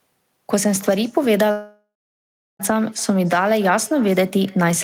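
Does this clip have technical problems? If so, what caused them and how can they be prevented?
Yes. An echo with no canceller runs through the whole speech clip: each syllable returns about 0.3 s later, roughly 24 dB quieter and thinner. A spectrogram shows faint, delayed ghosts of every harmonic stack. Enabling acoustic echo cancellation at the far end, or having that listener use headphones, prevents it.

A long network dropout spans 1.51 to 2.62 s, likely caused by packets not arriving. The decoder extends the last sound as a fading buzz, then about 0.71 s of flat silence follows, and roughly 1.08 s of speech is lost. The waveform shows a decaying tail, then a flat line. A steadier connection and larger jitter buffer reduce it.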